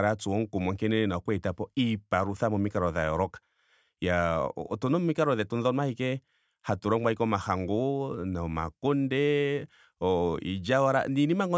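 Speech recording with no technical faults to report.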